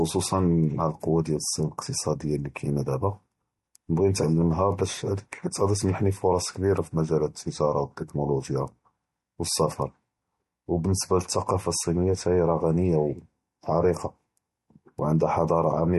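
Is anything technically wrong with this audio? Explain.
Yes. Throughout the speech the audio shows plainly audible damage, likely from MP3 compression at a low bitrate; the strain fits something near 48 kbps. With too few bits, the encoder cuts the treble at a fixed point, so nothing remains above 11.8 kHz, and it drops weak frequency lines that then flicker in and out between frames. The result is a dull top end, a watery, swirling texture, metallic chirps on s sounds, and smeared attacks.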